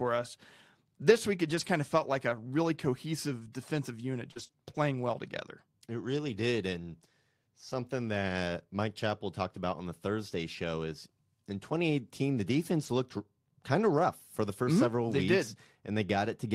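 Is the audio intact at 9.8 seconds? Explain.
Yes, the speech at 9.8 seconds plays through intact, with no dropout, click, distortion or other fault at that moment.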